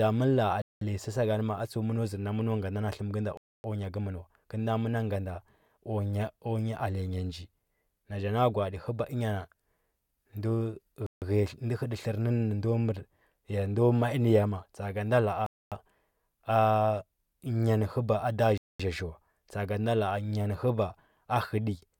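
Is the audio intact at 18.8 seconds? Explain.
No, 18.8 seconds sits at the very end of a Bluetooth stall: the speech drops to silence from 18.58 to 18.80 s, a 220 ms gap. The likely cause is radio interference delaying packets until the headphone buffer emptied, pausing playback until retransmissions arrived.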